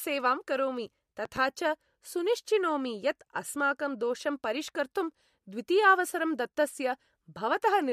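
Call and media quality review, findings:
Loud pop, 1.25–1.39 s: two sharp pops in quick succession, peaking a few dB above the speech, which carries on underneath. Likely a voltage step from a plug, switch, static discharge or driver glitch, shaped by downstream circuitry.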